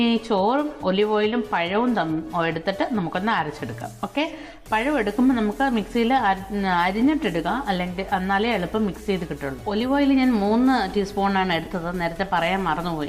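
At 11.65 to 11.67 s, lost LE Audio frames leave a 20 ms gap, which fits two dropped 10 ms frames. The decoder fills it, producing a brief noisy smear.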